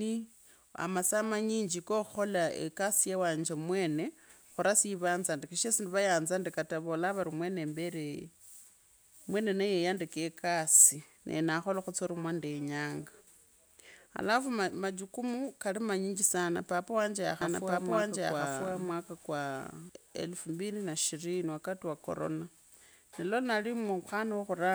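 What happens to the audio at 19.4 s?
At 19.4 s the speech is heard twice over: a second, full-band copy runs about one second behind the first, at roughly the same loudness, with no added decay or room tone, so the two layers clash. This doubled audio track spans 17.41 to 19.89 s and starts and stops abruptly. The likely cause is the same signal being captured again through a slower path, or an edit holding two out-of-step copies.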